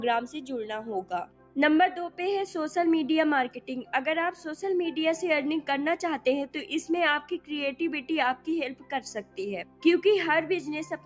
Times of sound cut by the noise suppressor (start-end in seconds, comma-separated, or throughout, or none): 1.25-1.57, 3.54-3.93, 8.75-8.92, 9.21-9.38, 9.64-9.84